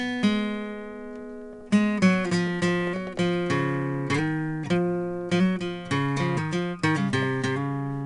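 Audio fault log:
throughout: 4-bit ADPCM compression. A gritty hiss rides on every loud passage of the music, with roughened attacks and nothing above 10.7 kHz. Each sample is coded as a coarse step from a prediction, fitting about 88 kbps at a sample rate near 22 kHz.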